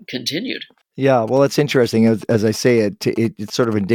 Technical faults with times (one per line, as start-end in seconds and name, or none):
1.28-3.74 GSM signalling bursts